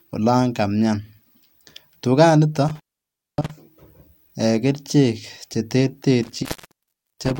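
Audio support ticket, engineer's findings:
Intermittent contact in speech path, 2.68–3.51 s and 6.23 s to end. Dropouts of about 0.58 s and 0.73 s, crackle at edges, faint hiss while open. Probable loose cable or plug briefly breaking the circuit.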